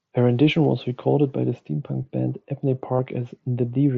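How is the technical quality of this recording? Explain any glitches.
The speech carries one brief glitch, in audio passed through the wideband mSBC Bluetooth headset codec. From 2.97 to 2.99 s there is concealed Bluetooth headset packet loss, about 22 ms long, which fits a short run of three lost frames. The receiver filled the gap by repeating the best-matching recent stretch of waveform. It sounds like a short buzzy tone at full level, then a slight warble as the real speech resumes.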